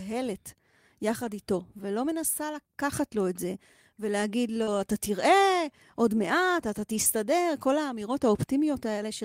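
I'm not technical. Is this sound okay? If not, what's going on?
No. This speech clip has two kinds of network fault.

Lost packet rebuilt from error correction: at 1.23–1.29 s, 2.49–2.55 s, 4.67–4.69 s and 6.96–7.06 s, pieces of the call went missing. The receiver played a rougher, noisier backup copy that arrived with the next piece, so there's no gap.

Short concealed packet loss: around 4.63–4.78 s, about 40 ms of audio never arrived in time. The receiver filled the hole by stretching the last sound forward, then blended back, which can smear or wobble that moment or drop a short consonant.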